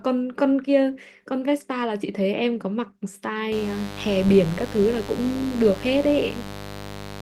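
Mains buzz runs from 3.52 s to the end of this speech clip: switching spikes leaking in twice per 50 Hz cycle make a raspy, harmonic-rich buzz about 10 dB below the voice.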